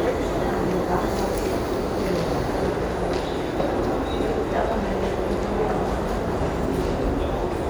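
Nothing in these sounds gives away a technical fault, so there's simply nothing to point to anywhere along the way.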